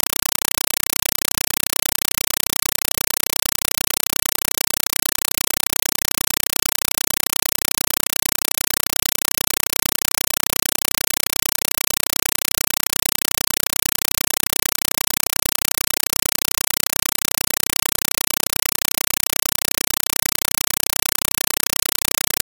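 Compressed stream played as audio runs throughout: a Dolby Digital (AC-3) bitstream, consistent with about 256 kbps, is treated as plain samples instead of being decoded, so each frame becomes a 5.33 ms burst of harsh noise then silence, repeating 31.25 times a second as loud chattering static.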